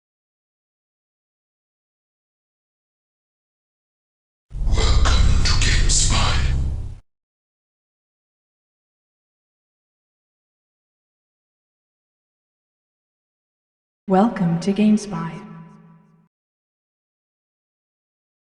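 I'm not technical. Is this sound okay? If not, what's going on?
Yes, nothing technical is going wrong with this sound at any point.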